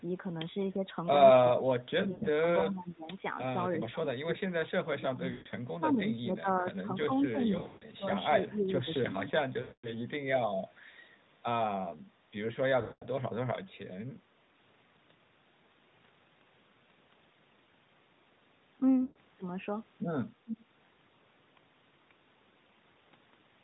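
Speech suppressed in double talk hits this speech recording at 1.42–3.08 s, 8.4–8.88 s, 9.29–9.43 s and 20.44–20.67 s. The voice dips by anywhere from roughly 10 dB to 25 dB, most deeply around 20.5 s, likely because an echo canceller treated both talkers as echo while the far side spoke. Lost AMR speech frames break up the narrowband sound at 2.12–2.27 s, 5.32–5.48 s, 7.58–7.86 s, 9.62–9.90 s, 12.82–13.06 s and 19.02–19.18 s, with gaps of 100 to 220 ms. In each gap the decoder repeats the last good pitch and vocal tract settings at falling gain, so the sound smears, then fades toward silence and returns rough.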